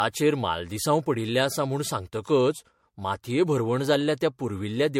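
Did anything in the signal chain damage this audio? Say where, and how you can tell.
Yes, at the codec stage: generation loss, likely from the speech being MP3-encoded around four times. Each pass requantises on a shifted frame grid, so throughout, attacks blur and a swirly, hollow smear exceeds what one pass near 70 kbit/s would leave. Nothing sits above 16.5 kHz.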